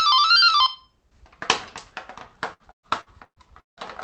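From 2.53 s to 3.86 s the call path suffers repeated packet loss, producing a robotic sound. Audio keeps arriving late or not at all, and the receiver covers each hole by extending the last sound it had. Six gaps follow one another closely, the longest about 170 ms, and roughly 39% of the stretch is concealed. The sound turns choppy and robotic, with pieces dropping out and the high end capped near 8 kHz, which fits the call codec's bandwidth.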